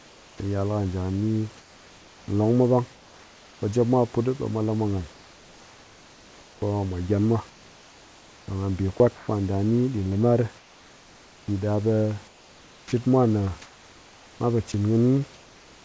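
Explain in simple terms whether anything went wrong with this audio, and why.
Comfort noise in place of the background appears five times: 0.0 to 0.4 s, 1.58 to 3.62 s after "da ni", 5.12 to 6.62 s after "ɓe mwa lamwa nghan", 7.5 to 9.28 s, and 10.58 to 11.48 s after "da ni ɗin limar". In each pause the real room background gives way to a smooth, featureless hiss, somewhat quieter in the first, third and fifth gaps. The likely cause is the sending side going quiet when it heard no speech, with the receiving side filling the gap with synthetic noise.

Sound dropped by the voice detector occurs at 8.98 s, inside the fourth gap. A tiny scrap of sound, about a hundredth of a second, is swapped for that steady noise. The sender's speech detector likely mistook this sound for background and stopped sending it.

Sound chopped by the voice detector runs from 12.28 s to the end at about 16 s. Here the audio keeps breaking up, with almost two seconds in total replaced by synthetic fill. 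This likely happens because the detector kept switching sending on and off, cutting out quieter bits of speech.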